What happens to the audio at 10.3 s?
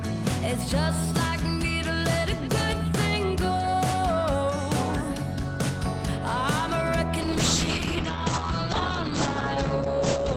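At 10.3 s the audio is inside a call bitrate drop running from 7.22 s to the end: the encoder codes coarsely and bandwidth narrows from 20 kHz to 8 kHz, sounding muffled and rough, consistent with roughly 9 kbps.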